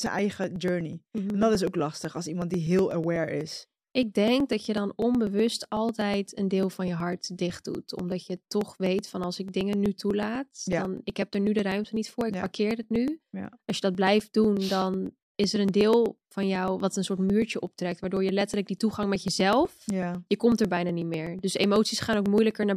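From 0.07 s to 22.63 s the speech is broken by periodic USB or driver dropouts: something stalls the audio path every 0.124 s, about eight times a second, and roughly a millisecond of samples is skipped each time rather than padded with silence. The join at each gap leaves a small discontinuity, so around two hundred evenly spaced ticks run through the clip, audible wherever the speech carries signal.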